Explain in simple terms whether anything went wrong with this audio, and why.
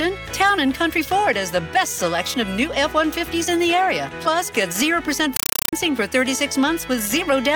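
From 5.36 to 5.73 s the sound is replaced by harsh, very loud chattering static, ticking about 31 times a second. This is a compressed stream played as audio: what sounds like Dolby Digital data was sent as ordinary sound instead of being decoded.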